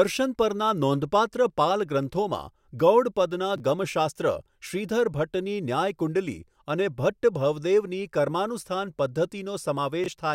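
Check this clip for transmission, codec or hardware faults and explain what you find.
The speech has two brief chunks-out-of-order faults. At 3.56 to 3.60 s, just before "ગમ શાસ્ત્ર શ્રીધર", and again at 10.04 to 10.08 s, a 20 ms chunk arrives one chunk late and plays after its successor. The result is a tiny jumbled stutter at three hard joins. Unlike a dropout, nothing is missing and there is no silent gap.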